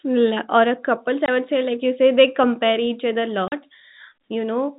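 At 1.26 to 1.28 s and 3.48 to 3.52 s, packet loss filled with silence cuts 20 and 40 ms holes into the speech. Their hard edges and lengths fit 10 ms packets, unlike smoothed concealment gaps. The G.711 telephone band stays under 4 kHz.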